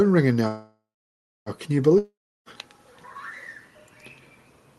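Audio carried over an Opus call link, with content reaching up to about 12 kHz. A call audio freeze runs from 0.47 to 1.49 s. The last sound trails off, then about 0.62 s of silence follows, likely from delayed packets emptying the jitter buffer. Nothing is lost; playback resumes where it stopped. A long network dropout follows from 1.98 to 2.49 s. A fading tail gives way to about 0.32 s of silence. Roughly half a second of audio never returns, likely because packets were lost outright.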